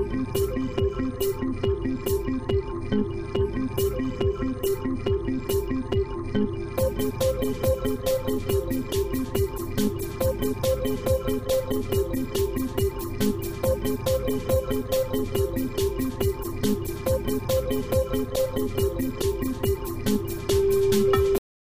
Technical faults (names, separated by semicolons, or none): cut-off end